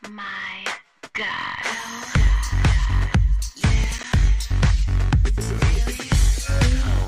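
From 3.84 to 4.13 s the processor falls behind and misses a run of audio deadlines, a processor overload crackle. Several short buffers, each around 10 ms, go unfilled in quick succession, about five of them, and each leaves a brief stretch of silence with abrupt edges where the audio cuts out and back in. Heard together, these hard-edged dropouts form a short gritty crackle riding on the sound for roughly a third of a second, ending once the load eases.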